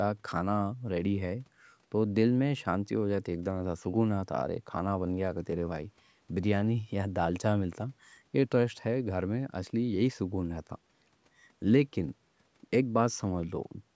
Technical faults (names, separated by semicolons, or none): none